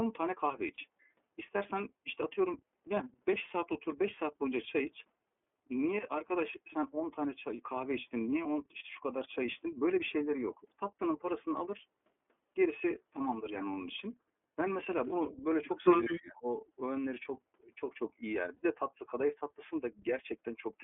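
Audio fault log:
throughout, iLBC codec: The audio is confined to a band of about 250 Hz to 3.4 kHz, with no bass and no air above it, and has a plainly audible rough, slightly synthetic edge to the speech. That pairing of telephone bandwidth and grainy, vocoder-like texture points to iLBC, and the frame behaviour fits its 13.33 kbps mode with 30 ms frames. Plain band-limiting alone would sound dull but smooth, not gritty like this.
0.75 to 0.79 s and 18.57 to 18.63 s, lost iLBC frames: At these points the speech briefly turns into a held, faintly buzzy vowel-like sound, about 30 ms the first time and 60 ms the second. That fits one lost frame and then two. The decoder fills each gap by repeating the last pitch cycle with some noise. Because each iLBC frame decodes on its own, the speech snaps back cleanly right after, with no smeared recovery as in codecs that depend on earlier frames.
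15.3 s, 15.76 to 15.8 s and 16.04 to 16.21 s, echo leak: Short fragments of speech return about 192 ms after the original. They sit about 25 to 30 dB below the speech at first and rise to about 15 dB below in the last and longest scrap. The likely cause is a loudspeaker echo that the far side's canceller did not fully remove. The fixed delay and brief, separate bursts set it apart from room reverberation, which would trail off smoothly without a gap.
16.07 to 16.46 s, speech suppressed in double talk: For around 0.4 s the speech sinks by as much as about 25 dB. This overlaps the strongest echo burst. This is likely an echo canceller clamping down while both sides were active and taking the wanted speech with the echo. Unlike a lost frame, there is no buzzy fill, just a gated dip in level.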